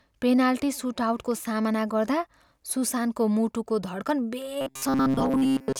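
From 4.61 s to 5.79 s the speech turns into robotic sound from repeated short buffers: a fixed, metallic 134 Hz buzz that loosely follows the words. Most of it is likely replayed 7.5 ms snippets standing in for late audio. Unlike dropouts, it leaves no gaps.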